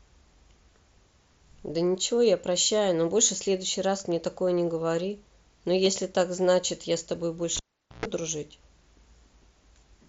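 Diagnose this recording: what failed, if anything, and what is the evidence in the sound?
Bluetooth link: concealed Bluetooth headset packet loss at 5.85 s. A 15 ms gap, likely two lost frames, was filled by repeating the last waveform stretch, leaving a tiny buzzy patch.

Analogue wiring: cable pulled and plugged in, 7.57 to 8.06 s. A pop, about 0.44 s of near silence, a 0.12 s burst of 60 Hz mains buzz, then a second pop.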